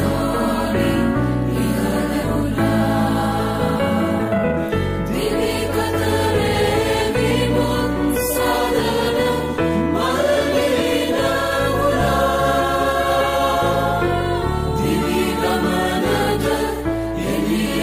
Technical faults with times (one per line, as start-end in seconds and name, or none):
2.23-2.25 skip ahead
4.19-4.60 jitter buffer speed-up